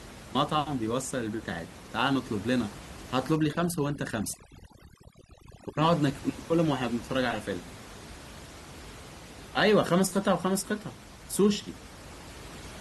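From 3.36 s to 5.82 s, overdone noise removal sets in. The room noise, about 18 dB below the speech, drops and breaks up into twinkling specks, and quiet parts of the voice vanish with it. A noise gate would mute everything at once; here individual frequency bands switch off separately.

At 6.18 s a short glitch marks damaged data in a compressed stream. The decoder misreads corrupted frames, loses sync and skips forward to the next valid header.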